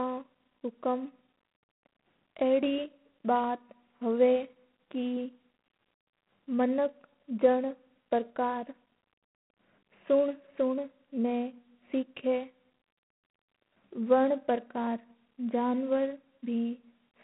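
From start to finish the speech carries G.726 ADPCM damage, a harsh, rasping hiss that rises and falls with the speech level, which fits 24 kbit/s coding. Plain band-limiting to 150 Hz to 3.4 kHz would leave no such level-tracking grit. Nothing passes above 3.8 kHz.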